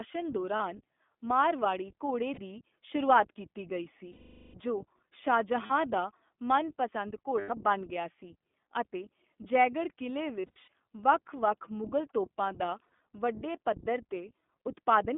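The whole recording passed through the iLBC codec at 15.2 kbps, in 20 ms frames that each stand alone, over a line limited to roughly 200 Hz to 3.5 kHz. Everything above that band is gone, leaving the speech thin and boxed-in. The coded excitation gives it a plainly audible rough, slightly synthetic edge throughout.

On top of that, lost iLBC frames break the stream seven times, and the decoder covers each gap by repeating the last pitch cycle blended with noise. At 0.56 s, and again at 2.34 s just after "ਮਾਰਵਾੜੀ ਘੋੜੇ", 40 ms goes missing, heard as a brief buzzy hold. The longest loss, 420 ms at 4.12 s, stretches into a held, breathy vowel that fades away. Another 40 ms drops out at 5.66 s. At 7.40 s, after "ਦਾ ਮਨਪਸੰਦ", 100 ms is bridged with a short drone. Around 10.40 s, following "ਸੀ ਅਤੇ ਜੈਗੜ੍ਹ ਕਿਲੇ", 180 ms of losses are scattered over 280 ms, and at 12.84 s 100 ms is spread over 160 ms. 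Each of these last two has runs of a few tens of milliseconds. After every gap the speech is right again almost immediately.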